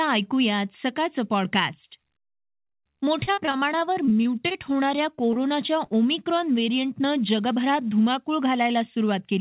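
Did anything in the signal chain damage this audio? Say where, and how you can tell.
Yes. Repeated packet loss (robotic sound) runs from 2.62 to 4.56 s in this speech. At the network stage, 15 gaps, the longest 39 ms, were each patched by extending the previous sound, so about 17% of that stretch is synthetic. That produces the choppy texture.

Short concealed packet loss occurs at 5.15–5.19 s, 5.33–5.37 s and 5.85–5.89 s. Each hole is about 20 ms, which fits one lost call packet. It was filled by continuing the last waveform and then cross-faded back, heard as brief smears over the 4 kHz-limited call audio.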